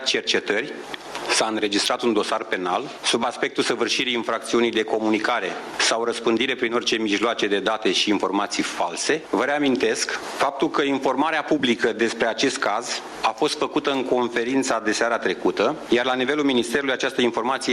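Gain pumping runs through the whole clip. The level keeps breathing up and down by about 15 dB. Loud and quiet passages sit unnaturally close together, and everything sounds squashed. The likely cause is input gain set far too high for the microphone, with a fast limiter or compressor hauling it back down on each peak.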